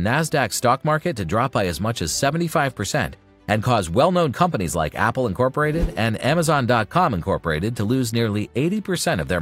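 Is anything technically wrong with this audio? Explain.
No, nothing technically wrong can be heard anywhere in this audio, so there is no fault to describe.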